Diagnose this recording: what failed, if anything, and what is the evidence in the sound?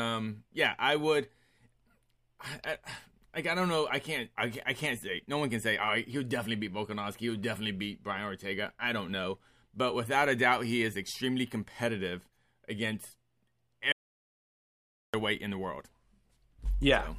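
At 13.92 s the speech cuts out mid-flow into silence, with no room tone, until it returns at 15.14 s on "in the world". About 1.2 s is gone. This audio dropout to silence likely comes from a lost input connection while the recorder kept writing silence.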